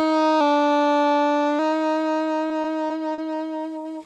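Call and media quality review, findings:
Drift correction step, 0.41–1.59 s: everything slows about 6.4% and drops roughly 115 cents, just over a semitone, then snaps back. Likely a clock-sync resampler jumping its rate in one go to rebalance the buffer.

Repeated stalls (stutter), 2.49–3.21 s: four short hiccups, longest 40 ms, about 90 ms stretched in total. Jitter buffer running dry as packets lag, so the receiver extends the last bit of sound each time. Nothing actually dropped, it just drags. Audio tops out around 12 kHz, consistent with the Opus path.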